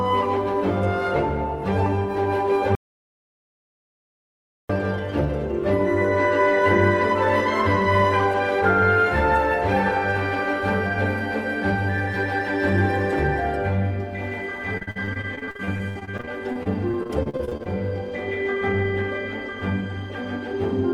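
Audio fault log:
2.75–4.69 s, audio dropout to silence: the sound stops abruptly and about 1.94 s is replaced by silence with no room tone, then resumes mid-flow. This is likely a lost input or mute. Unlike packet-loss concealment, nothing is patched or repeated.
14.77–17.67 s, repeated packet loss (robotic sound): dozens of brief holes, the longest 57 ms, are each filled by stretching the preceding sound. About 27% of this span is concealed, giving a choppy texture with pieces missing rather than one clean silent gap.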